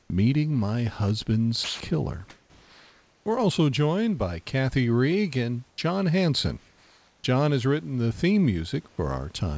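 Speech recorded over a call path, with room noise sitting about 39 dB below the voice and nothing above 8 kHz, which fits a G.722 codec. Three times the real background gives way to a steady, featureless hiss: 0.02 to 0.10 s (about 6 dB louder than the room), 5.70 to 5.78 s, and 6.58 to 7.24 s (both about 2 dB quieter). This is comfort noise in place of the background, likely from discontinuous transmission: the sender stopped sending during pauses, and the receiver synthesized noise roughly matching the room instead. Twice, speech itself is cut away. At 1.64 to 1.80 s and at 8.88 to 8.98 s, just after "has written the theme", about 60 to 70 ms of sound turns into that same flat noise before the voice returns. This is sound dropped by the voice detector, which likely judged the sound to be background and stopped sending until the speech triggered it again.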